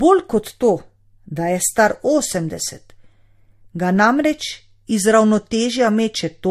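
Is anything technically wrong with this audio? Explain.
Yes. Throughout the speech there is transcoding between lossy codecs, likely an MP3 at about 64 kbit/s re-encoded as Vorbis at about 41 kbit/s. Nothing remains above 15.2 kHz. Unlike a single codec pass, two distinct kinds of smearing and warble overlap, because the second encoder spends bits on the first one's damage.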